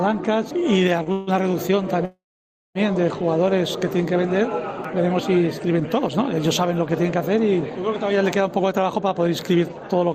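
At 1.03 s a short stall from a late packet holds the last sound for an extra 25 ms before it continues from the same point, with nothing lost. The jitter buffer briefly ran dry. On a spectrogram the harmonics smear flat for that instant, and the waveform repeats one cycle shape.

From 1.12 to 1.30 s comes a call audio freeze. The sound is stretched into a 150 ms buzz that never reaches silence. From 2.05 to 2.78 s a longer freeze fills 701 ms: a fading buzz decays into 570 ms of silence, then the audio resumes exactly where it stopped. The likely cause is packets held up in transit, which emptied the jitter buffer. A spectrogram shows frozen horizontal bands fading into a blank gap. The waveform's envelope tapers to a flat line.

From 8.72 to 10.05 s a jitter buffer speed-up plays the audio at 109% speed with unchanged pitch. Short pitch-period slices totalling around 150 ms are cut out to shed the built-up delay, so the sound seems hurried. 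Events crowd closer on the spectrogram while harmonic spacing stays the same.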